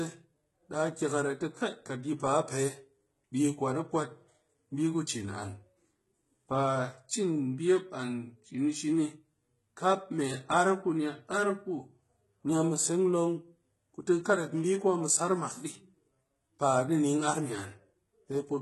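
From start to finish, the top end stops dead at 11.8 kHz, and the speech's s sounds come out gritty and metallic: likely HE-AAC compression, heavily damaged, consistent with a bitrate around 16 kbps.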